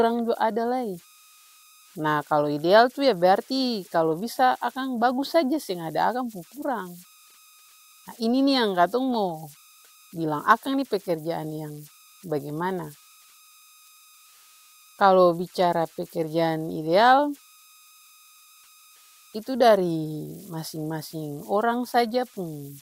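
From start to finish you get converter idle tones: a whistle somewhere around 1.5 kHz, about 29 dB below the speech, riding in the pauses. An undithered delta-sigma converter settles into repeating bit patterns on low-level input, and those patterns surface as tones and grainy hiss under quiet passages.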